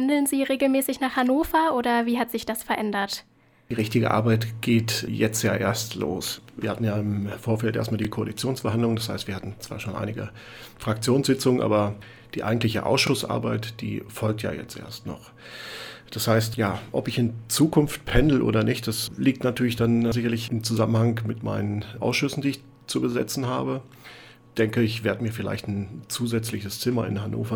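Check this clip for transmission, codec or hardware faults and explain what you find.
A regular stutter recurs through the clip, caused by overlapping chunks. At 3.02–3.05 s, 8.05–8.07 s, 13.07–13.10 s, 18.10–18.12 s and 23.12–23.15 s, a brief hiccup or click breaks the flow as about 25 ms of sound plays twice. The audio was handled in 5-second blocks, and each new block began slightly before the previous one finished, so the tail of one block repeats at every join, once every five seconds.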